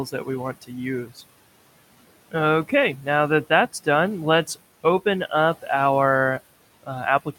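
From 1.06 to 1.23 s the speech turns faint and swallowed, dipping by about 11 dB for around a tenth of a second. This is speech cut by the noise suppressor, which mistook quiet speech for room noise and turned it down.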